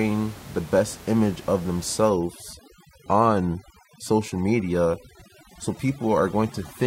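A speech recording, with room noise sitting about 20 dB below the voice, runs into overdone noise removal from 2.09 s, just after "the best image of", to the end. The reducer mutes each frequency band it judges close to its noise estimate, taking quiet voice detail with it. The gaps fall to near silence with twinkling specks. On a spectrogram this appears as blank, holed regions scattered with isolated bright dots, and ragged, thinned harmonics.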